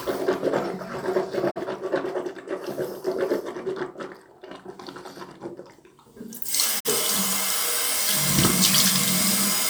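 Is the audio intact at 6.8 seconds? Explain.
No, a digital broadcast dropout runs from 6.79 to 6.89 s. The receiver stopped getting valid frames and muted until good ones returned, so the sound fades out over about 20 ms into a brief hole. The roughly 43 ms of missing audio fits one lost frame.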